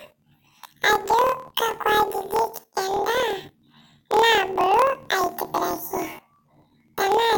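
Throughout the speech, planar audio is read as interleaved. Each 26.12 ms block of left-then-right samples plays as two double-speed halves, so pitch rises 12 semitones while overall pace holds, with a flutter at the 38.3 Hz block rate.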